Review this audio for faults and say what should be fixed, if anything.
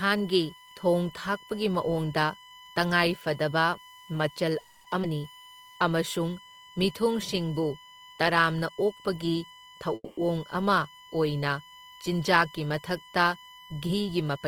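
USB whine: current drawn by USB traffic in 1 ms frames leaks into the audio through power or ground, leaving a steady 1 kHz whine, strongest at its 3 kHz harmonic, about 25 dB below the speech throughout. Prevent it with a powered or isolated hub, a ground-loop isolator, or a cleaner supply for the interface.

Call audio freeze: packets were likely held up until the jitter buffer ran dry. At 4.59 to 4.86 s the receiver filled about 250 ms by stretching the last sound into a fading buzz or hiss. At 9.94 to 10.19 s it filled about 230 ms, ending in roughly 30 ms of silence. The speech then resumes where it stopped, with nothing lost. Prevent this with a steadier network path, such as wired rather than Wi-Fi, or a larger jitter buffer.

Skip ahead: audio was dropped while later packets were already queued. At 5.02 to 5.05 s, playback jumps forward through a 10 ms join, cutting about 70 ms of speech. 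Prevent it with a buffer that absorbs bursts instead of discarding them.

Jitter buffer slow-down: the buffer was rebuilding its reserve, so the receiver repeated pitch periods from 5.36 to 5.73 s. This added 70 ms, and the speech runs at 83% speed with drawn-out sounds at unchanged pitch. Stabilising the network so the buffer stops running low prevents it.

Jitter buffer speed-up: excess delay accumulated, so the receiver trimmed short pitch periods from 13.86 to 14.38 s. About 50 ms was removed, and the speech sounds hurried at 110% speed. Gentler buffer adaptation or smoother packet delivery prevents it.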